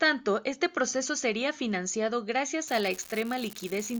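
From about 2.66 s to the end, an unreliable data bit flips at random, throwing same-sized spikes near -25 dBFS, so a steady fizzy crackle sits under the speech.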